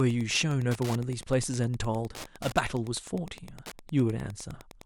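A steady, faint ticking runs under the speech from start to finish, repeating about ten times a second and sitting well below the voice. It is Wi-Fi interference: a Wi-Fi radio near the audio circuitry transmits a beacon every 102.4 ms, and the circuit rectifies that radio energy into audible clicks. The unchanging spacing of the ticks matches that beacon period exactly.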